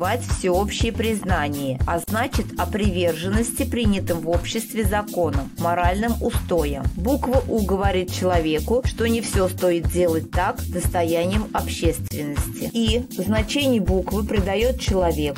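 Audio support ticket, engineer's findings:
Gap at a join of encoded pieces: 41 ms gap at 2.04–2.08 s, 31 ms at 12.08–12.11 s, spaced 10 s apart. Component: segment concatenation without trimming encoder delay and end padding. Unlike packet loss, sound resumes exactly where it stopped, with nothing skipped.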